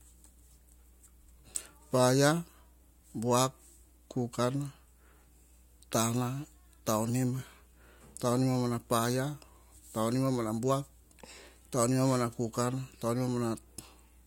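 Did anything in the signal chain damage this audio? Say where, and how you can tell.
Yes. A steady low tone sits underneath the speech from start to finish, pitched at 60 Hz and well below the talker, roughly 30 dB down. Its constant level and fixed pitch, unaffected by pauses, mark it as mains hum picked up in the analogue wiring before conversion. A ground loop or a nearby transformer has let the 60 Hz power line leak into the signal path, and the converter then recorded that tone along with the speech.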